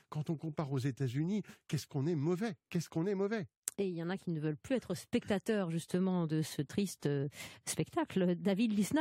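Speech recorded without any audible technical fault in the signal path.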